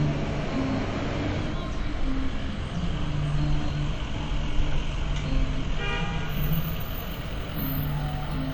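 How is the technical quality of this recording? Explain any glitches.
The recording has one fault, present for the whole clip: transcoding between lossy codecs. Two layers of compression artefacts sit on top of each other. Nothing reaches above 20 kHz. The character fits a likely chain of HE-AAC around 48 kbit/s followed by WMA around 64 kbit/s. The second encoder spends its bits re-coding the first one's artefacts and adds its own. The result is the two codecs' different artefacts heard together.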